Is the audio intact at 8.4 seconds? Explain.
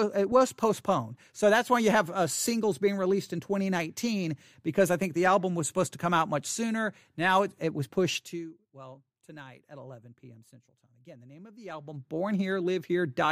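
No. From 8.13 to 8.56 s the speech carries a fine ticking, zipping texture as its level drops by roughly 20 dB. This is zipper noise. Instead of gliding down, the gain falls in small jumps, around a hundred per second, with no smoothing between them. Each jump leaves a tiny discontinuity in the waveform that clicks, and together those clicks form the buzz heard over the voice while the level moves.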